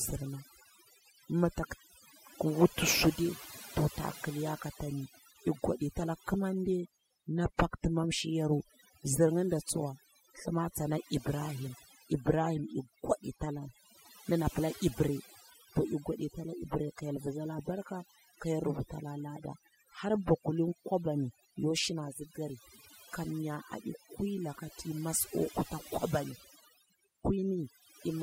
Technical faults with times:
0.00-28.22 overdone noise removal

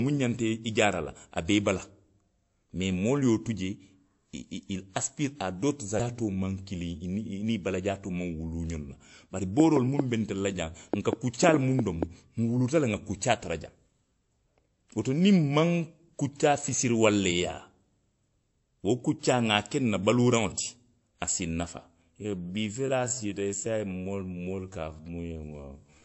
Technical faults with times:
0.00-26.05 transcoding between lossy codecs
9.60-12.04 train of clicks
22.14-26.05 time-stretched section

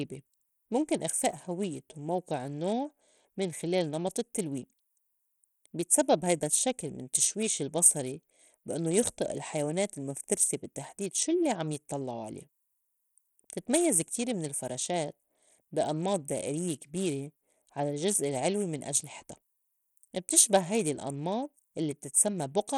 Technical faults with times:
0.00-22.77 Bluetooth SBC compression

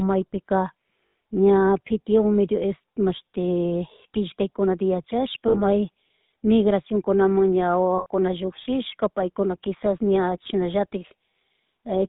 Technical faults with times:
0.00-12.08 GSM full-rate codec
1.06-1.14 lost GSM frames
5.48-5.60 lost GSM frames
7.98-8.06 lost GSM frames

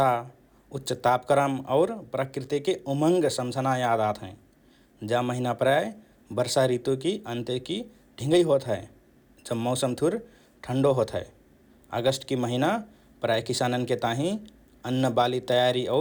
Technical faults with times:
none

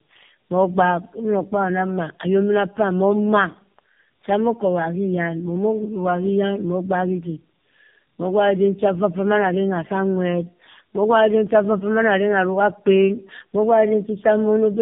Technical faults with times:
0.00-14.81 tandem speech coding

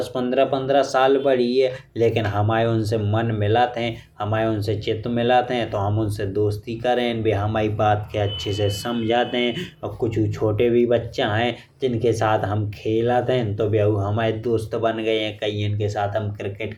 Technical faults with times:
none

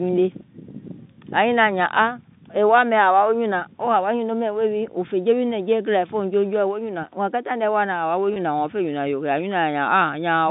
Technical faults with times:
8.34-8.36 packet loss with pitch repetition

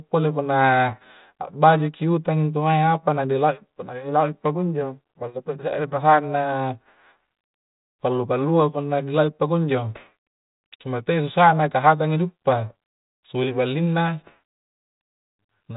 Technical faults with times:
0.90-1.04 bit errors on an ADPCM link

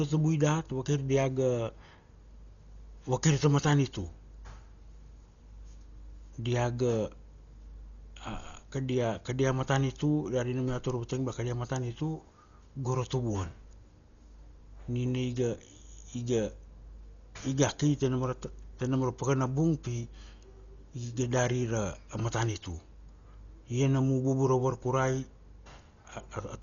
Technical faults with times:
0.00-26.63 Dolby Digital compression

